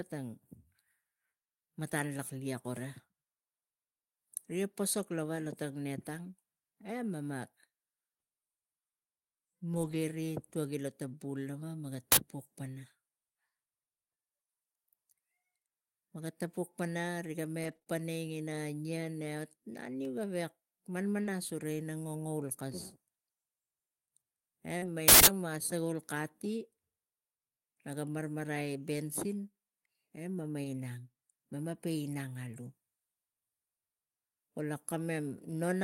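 Stretches of rough, noisy-sounding speech turn up at 9.73 to 9.95 s, 17.63 to 17.77 s, 21.24 s, 24.82 to 24.88 s and 30.64 s, with no break in the flow. These are lost packets rebuilt from error correction. The packets never arrived, so the decoder played the low-bitrate duplicates carried inside the following packets. That covers 120 ms at the first spot, 80 ms at the second, 20 ms at 21.24 s, 40 ms at 24.82 s and 20 ms at 30.64 s. The coarse copies explain the grainier texture. Twice the audio erupts into a harsh, loud blast of digital noise, a short one at 12.12 to 12.17 s and a much longer one at 25.08 to 25.27 s. Both are an uninitialised buffer: a block was sent to the output before any audio had been written into it, so leftover memory contents played as samples. The first burst lasts about 46 ms, which fits a 2048-sample block. The second lasts about 186 ms, which fits an 8192-sample block. 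Brief smears sit at 17.79 to 17.83 s and 17.83 to 17.88 s, right after the second rebuilt stretch, and again at 21.22 to 21.26 s and 24.78 to 24.84 s, the last two each leading into the rebuilt audio nearby. This is short concealed packet loss. About 20 ms of speech went missing in each of the first three cases and 40 ms in the last, and the receiver bridged each hole by extending the preceding sound for roughly 12 to 40 ms before blending back into real audio.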